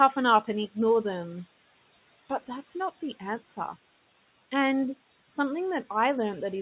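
Speech, heard through a call path with nothing above 4 kHz, which fits a narrowband telephone codec. Noise suppressor artifacts run throughout. The suppressor pulls the room noise down by about 16 dB between phrases, then lets it rise under the speech.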